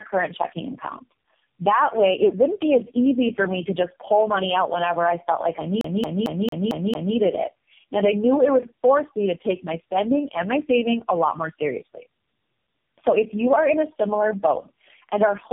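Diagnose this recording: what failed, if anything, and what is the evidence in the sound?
Tandem speech coding, a call-processing and codec fault, runs through the whole recording. The speech is rough, muffled and warbly, worse than one narrowband coder would leave it, which points to repeated decode-and-re-encode stages, likely several AMR-NB passes with other telephony codecs between them. Each pass degrades the previous one's output. On a spectrogram nothing appears above 3.5 kHz, and the formant bands look smeared and blotchy, with frame-rate flicker between harmonics.

A CD stuck on one turn, a storage and playback fault, starts at 5.81 s, just after "I felt like I", and lasts until 7.16 s. A single 225 ms slice plays six times in a row with a short mute at each jump, giving the fast, even stutter of a skipping disc. The laser is thrown back one track at the same scratch on every revolution. 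In the waveform, identical blocks repeat at a fixed period with brief gaps.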